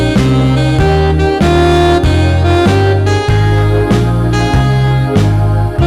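Hard clipping runs through the whole 6-second clip: the sound is driven about 9 dB past what a stage in the chain can pass, so peaks are sliced flat on roughly 7 percent of samples. Those squared-off tops generate high harmonics, heard as harsh fuzz on every loud passage.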